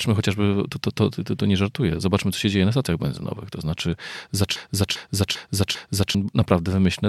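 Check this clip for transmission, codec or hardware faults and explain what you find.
One fault is present, a broken-record loop from 4.56 to 6.15 s. A 0.40 s fragment of speech repeats exactly, four times back to back. The original speech in that span is lost. The likely cause is a stalled player or stream resending its last buffer.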